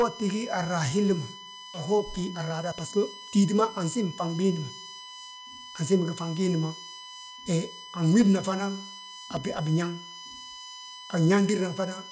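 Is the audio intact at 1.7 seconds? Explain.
No. At 1.74 to 1.76 s there is a skip ahead: about one and a half seconds of speech was dropped while later audio was already queued, so playback leaps forward with no gap. The waveform shows an abrupt splice, and the spectrogram shows a sharp vertical seam where the speech patterns change instantly.

A USB whine also runs through this moment. Current drawn in the bus's 1 ms frames leaks into the audio as a fixed 1 kHz tone with harmonics, loudest at 3 kHz, roughly 15 dB below the speech. On a spectrogram it appears as steady horizontal lines at 1, 2 and 3 kHz.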